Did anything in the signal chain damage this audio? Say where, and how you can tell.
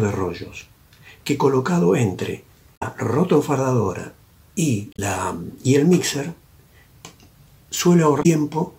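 Yes. Brief glitches break through at 2.73–2.83 s, 4.93–5.00 s and 8.19–8.26 s, pointing to damaged data in the compressed stream at the codec stage. Corrupted frames there are misread, and the decoder loses sync until it finds the next valid frame header.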